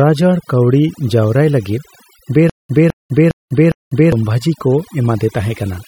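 A speech recording with overdone noise removal throughout. The noise reduction was set too strong. It pulls individual frequency bands far down or shuts them off whenever they sit close to its noise estimate. Quiet parts of the voice vanish along with the noise. The background drops, broken by small twinkling specks. From 2.50 s to 4.12 s there is a stutter with silent gaps. A burst of about 210 ms plays, then about 197 ms of digital silence follows. The cycle repeats every 407 ms, four times in all. The likely cause is a stalled player or stream replaying its last fragment at each retry, then running empty. The audio that belonged in that stretch is lost.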